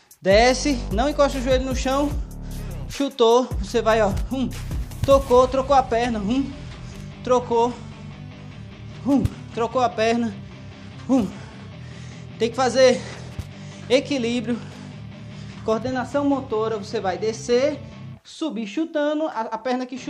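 No technical faults can be heard in the audio: the signal stays continuous throughout, with no breaks, distortion or interference.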